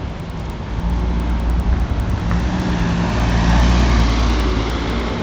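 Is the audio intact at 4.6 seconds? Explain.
No, not really. At 4.6 seconds you're still hearing the resampler restarted on every block, which runs through the whole clip. The conversion from 16 kHz up to 48 kHz was done in 100 ms chunks, each treated as if nothing came before or after it, so every chunk edge gets a small error. That comes across as a steady tick about 10 times a second, riding along whenever there's sound playing.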